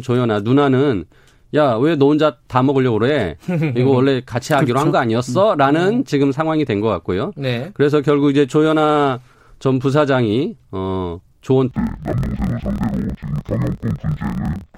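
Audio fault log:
11.71–14.77 s, interleaved audio read as planar: the speech drops an octave, sounds doubled and choppy at the 38.3 Hz block rate. Each 26.12 ms block's alternating left-right samples were split into halves, so each half plays at half speed while overall pace holds.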